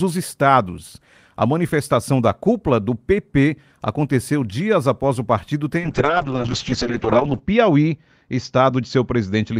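A call bitrate drop begins at 5.81 s, just after "após o partido ter", and runs to the end. The Opus encoder falls from 32 to 6 kbps, bottoming out for 1.59 s, and its bandwidth shrinks to 8 kHz, leaving the speech coarse, watery and muffled.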